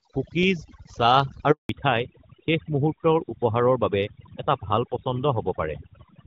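Throughout, overdone noise removal strips quiet frequency bands along with the hiss. The background drops, and the spectrogram shows twinkling isolated specks.

At 1.51 s a handover gap begins. No speech frames arrive during the network switch, so the sound dies within milliseconds into a flat waveform lasting 180 ms, until 1.69 s.

From 1.69 s to the end comes a fallback to narrowband, from HD Voice (which fits a 12.65 kbit/s AMR-WB link) to an older codec. Everything above 4 kHz vanishes, and the speech turns duller and rougher. On the spectrogram the energy stops sharply at 4 kHz.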